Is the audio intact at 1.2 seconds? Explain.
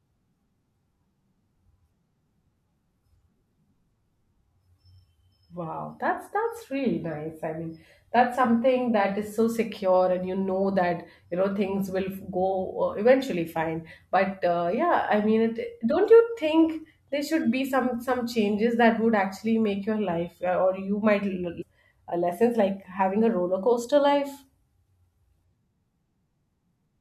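Yes, the speech at 1.2 seconds is intact, with no dropout, click, distortion or other fault at that moment.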